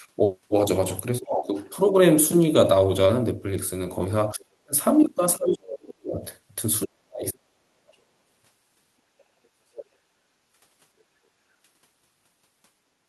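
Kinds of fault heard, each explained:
Speech suppressed in double talk: the talker's voice sinks sharply at 1.21–1.49, 4.31–4.74, 5.36–6.24 and 6.85–7.98 s, by roughly 20 to 40 dB, likely an echo canceller muting both sides at once. Unlike gating, the voice itself fades, not just room sound.
Other side's voice leaking through: a second, separate voice comes through the microphone at 1.3–1.69 s, nearly as loud as the talker, and faintly at 9.75–9.85 s, far below. This is extra sound that was likely not cancelled, rather than something being lost.
Background gated by the echo canceller: only the room tone briefly dips, by about 10 dB at 9.02–9.12 s and about 7 dB at 10.09–10.19 s, then returns. The drops are short and shallow, and they affect background sound rather than the voice.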